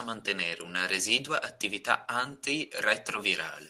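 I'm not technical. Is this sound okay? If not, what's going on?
Yes, this sounds fine.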